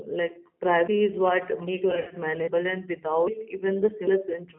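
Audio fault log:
throughout: G.729 codec. The sound is confined to a telephone band of roughly 200 Hz to 3.4 kHz, with a plainly audible rough, synthetic grain. This fits G.729A at 8 kbit/s, which rebuilds each short frame from a vocal tract filter, a pitch estimate and a few pulses instead of the actual waveform. A plain band-limit would only sound muffled. This coder adds a rough, synthetic texture that stays steady across the whole clip.
1.91 to 2.15 s: VoIP packet loss concealed by the speech codec. About 140 ms of audio is missing, spread over 200 ms, and the longest gap is 80 ms. This points to about seven 20 ms packets lost. The decoder covers each hole by repeating its last pitch and filter at falling gain, so the speech smears into a fading buzzy tone or coloured noise instead of dropping to silence. It stays weak for a short while after packets return. That lingering weakness and the smearing tell it apart from a clean skip.
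0.87, 2.47, 3.27 and 4.07 s: audio missing between chunks. Each of these is an abrupt jump where roughly a fifth of a second is cut out and the two sides are butted together with no silence and no fade. The later three jumps fall 0.8 s apart, which is consistent with 1 s chunks that each lose about 0.2 s at the handover, likely in the recorder or processor. The joins are instantaneous and never turn buzzy, unlike the concealed packet loss, and their regular spacing gives them away.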